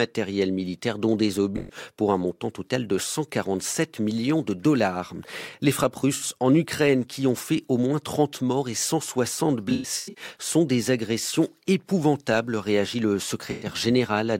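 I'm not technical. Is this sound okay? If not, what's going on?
No. This speech has AAC frame loss with concealment: chunks of the compressed stream went missing, and the player guessed the gaps from the sound just before. You hear brief smeared, hissy or hollow patches at 1.57 s (after "militaires dont des"), 6.15 s, 9.69 to 10.24 s (just before "sont des agressions épouvantables") and 13.51 s (after "agressions épouvantables réagit le").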